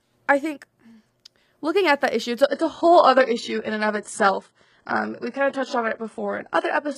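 At 2.43 s, just after "at that issue it's", the speech drops to an adaptive stream at a lower bitrate and stays there to the end of the clip. The player switched to a lower-quality rendition when the connection slowed, with no gap. Codec artefacts rise abruptly, and nothing remains above 11.1 kHz. The sound points to a move from a mid-rate AAC stream to a very low-rate HE-AAC one.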